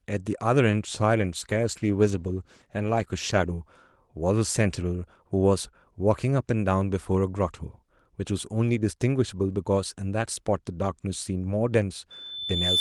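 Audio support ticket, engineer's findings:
Call bitrate drop, 1.20 to 3.59 s. Speech turns rough and muffled, highs cut, lowest quality held about 2.3 s. Encoder starved after bandwidth estimate fell; sound fits Opus dropping from roughly 32 kbps to about 15 kbps.

Loudspeaker feedback squeal, 12.10 s to clip end. Single 3.5 kHz tone swells over roughly 0.7 s to about 5 dB above the speech. Mic picking up its own loudspeaker, loop gain exceeding one at that frequency.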